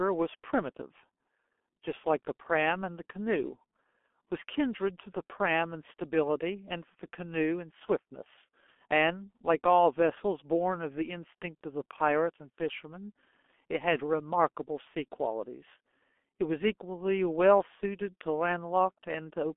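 Throughout, the speech sounds muffled and hoarse, with consonants smeared and nothing heard above about 3.5 kHz. This is G.723.1 codec damage: the band is squeezed to roughly 250 Hz to 3.4 kHz, and the slow 30 ms frame updates blur detail, consistent with a 6.3 kbit/s rate.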